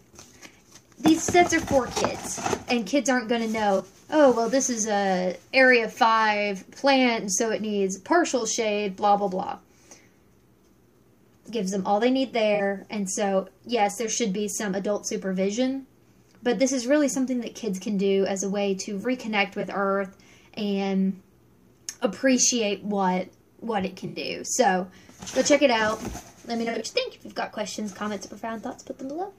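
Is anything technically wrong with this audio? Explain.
Yes. Corrupt frame concealed occurs at 1.94–2.02, 3.77–3.85, 8.39–8.42, 12.55–12.61, 19.60–19.64, 24.06–24.17 and 26.64–26.82 s. The decoder detected damaged AAC frames and either muted them or substituted a sign-scrambled copy of the previous spectrum, producing brief holes or smears; the longest, near 26.7 s, points to several consecutive frames. Spectrograms show short vertical gaps or blurred bands; waveforms show matching dips.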